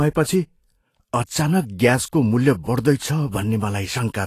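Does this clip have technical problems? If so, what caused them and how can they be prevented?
Yes. The speech sounds hissy and grainy throughout, with blurred attacks and nothing above 14.2 kHz. This is likely Vorbis compression at low quality, which fits a bitrate around 35 kbps. The treble is quantised so coarsely that its detail turns into noise. To prevent this, encode at a higher Vorbis quality setting and keep an uncompressed master for re-encoding.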